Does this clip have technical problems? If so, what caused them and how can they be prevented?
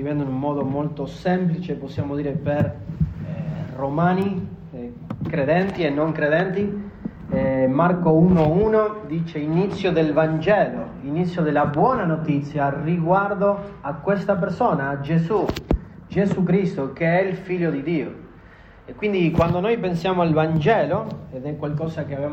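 Yes: two sharp, broadband ticks at 4.22 s (about -19 dBFS) and 15.07 s (about -31 dBFS) are bit error spikes, where a single flipped bit throws one sample off. Using error-checked memory and links with parity or CRC prevents this.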